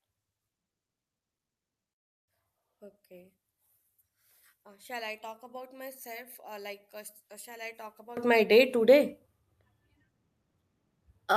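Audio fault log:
0.00 to 8.17 s, one channel inverted: For the first eight seconds or so the speech drops by about 20 dB and goes faint and distant, then snaps back to full body. That's the classic sign of one stereo side likely having its polarity flipped. Summed to mono, everything the two channels share cancels, so the centred voice and its low end mostly disappear and you're left with a faint difference signal.
1.92 to 2.28 s, long network dropout: Right inside that weak stretch the audio cuts out for about a third of a second. Around 0.35 s of sound likely never arrived over the network, and what's left in that window is close to silence, with the receiver's concealment fading out fast. When the sound picks up again at 2.28 s it carries on past the missing piece, so that chunk is simply gone.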